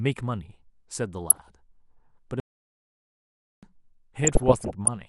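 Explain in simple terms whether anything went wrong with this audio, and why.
Weak digital radio reception let a small share of bit errors, under one percent, slip past error correction, producing DAB burbling: short blips of noise over the speech from 1.29 to 1.48 s and again, longer, from 4.24 to 4.88 s.

An audio dropout to silence runs from 2.40 to 3.63 s, about 1.2 seconds. The input was likely lost, through a disconnection or a mute, while recording continued, so the speech cuts off into total silence, with no background sound, and whatever was said then is gone.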